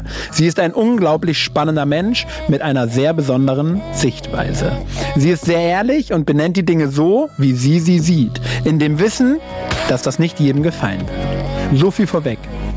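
Gain pumping runs throughout the clip: loud and soft parts end up closer in level and the sound is squashed, with the level swinging by about 15 dB. The likely cause is gain set far too high, with a fast limiter clamping each peak.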